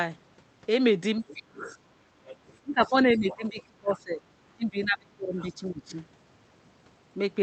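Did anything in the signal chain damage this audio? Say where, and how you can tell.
Yes. Other side's voice leaking through, at 1.28–1.78 s, 2.28–2.57 s, 3.29–3.63 s and 3.93 s: a second, fainter voice sits about 15 to 25 dB under the talker. This is call processing, likely an echo canceller leaving residual loudspeaker pickup in the microphone signal.

Speech suppressed in double talk, at 2.62–4.22 s and 4.56–5.93 s: the talker's speech dips by as much as about 20 to 25 dB in pieces, roughly a second in each span, while the far side talks. This is likely echo suppression clamping both voices when it can't separate them.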